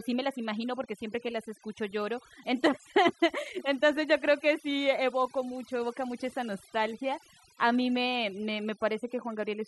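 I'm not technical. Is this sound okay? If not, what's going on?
No. The whole recording suffers from overdone noise removal. A cleanup tool meant to strip out background hiss was set far too strong, so it also cut away the quieter parts of the speech along with the noise. The pauses drop away and break up into twinkling, warbling specks. Unlike leftover hiss, the background here is too empty rather than too noisy.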